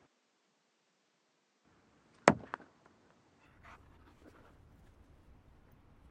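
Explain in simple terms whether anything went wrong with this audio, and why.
For the first 3.46 seconds the sound is duller and boxy, with nothing above 9 kHz, so the crisp top end is missing. A faint new layer of background noise sits well beneath the sound. At 3.46 seconds the full brightness returns at once, with no gap and no jump in loudness. This points to an input switched to a poorer device, likely a narrower-band microphone or headset that was active at the start before recording moved to the better input.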